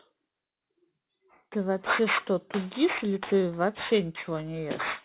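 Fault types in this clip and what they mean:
aliasing: speech resampled from 16 kHz to 8 kHz without an anti-alias filter, so energy above 4 kHz folds back as gritty, metallic sibilants, fairly loud throughout.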